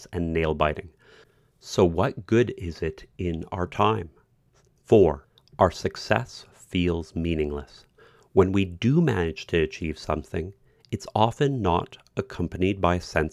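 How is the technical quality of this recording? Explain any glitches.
No glitches or technical faults turn up anywhere in this speech recording.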